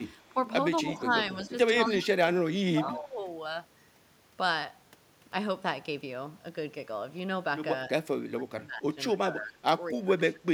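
A speech recording from a call, marred by speech suppressed in double talk at 0.82–1.54 s, 1.87–3.21 s, 7.89–9.6 s and 9.92–10.49 s. The talker's level dips, by about 10 dB in the first stretch and up to about 25 dB later, likely because an echo canceller turned everything down while both sides spoke. On a waveform these show as sudden notches in the envelope, and on a spectrogram as fading or gapped bands. Echo leak appears at 0.94–1.14 s and 1.85–2.05 s, where a faint copy of the voice returns 246 ms late, about 20 dB and about 25 dB below the speech. It is likely residual loudspeaker pickup that the far end's canceller failed to remove, visible on a spectrogram as a weak repeat of the speech pattern shifted later in time.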